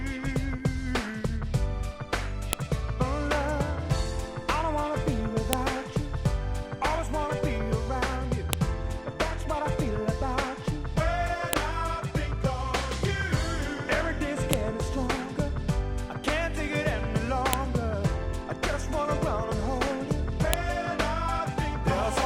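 At 2.53, 5.53, 8.53, 11.53, 14.53, 17.53 and 20.54 s there is a sharp, loud click, a file header played as audio. The events fall exactly 3.0 s apart, which marks the joins between separate WAV pieces whose headers were never stripped. Those few dozen bytes of header data are decoded as sample values, so each join produces a brief snap that cuts through whatever the sound is doing at that moment.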